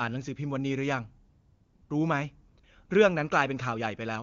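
AMR comfort noise replaces the real background from 1.29 to 1.89 s, then in brief bursts at 2.49 to 2.57, 2.59 to 2.63 and 2.85 to 2.89 s. The phone judged the sound silent and stopped sending speech frames, so the receiver synthesised smooth, steady noise that switches in abruptly. Unlike a dropout or noise gate, the gap is filled with hiss rather than true silence.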